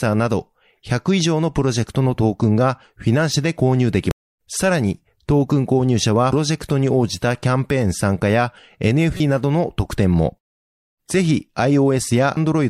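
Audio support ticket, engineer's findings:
Damaged data in compressed stream: corrupt bytes in the encoded speech, so the decoder misreads frames, loses sync and hunts for the next valid header. Symptom: brief artefacts at 4.11 s (single click-length event), 9.17–9.20 s and 12.34–12.37 s, each around 35 ms or less. Probable component: storage or transport layer upstream of the decoder, not playback hardware.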